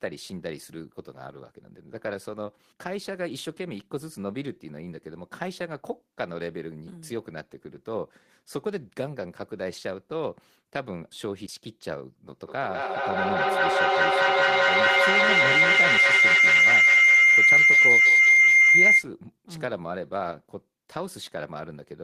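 Feedback howl runs from 12.33 s to 19.12 s. A loudspeaker's output is reaching a microphone on the same call, and each trip around that loop comes back louder than it left, so the sound reinforces itself instead of dying away. The repeats collapse onto a tone around 2 kHz, pulsing roughly every fifth of a second with the loop's delay, and climb to about 14 dB above the speech before cutting off at 19.12 s.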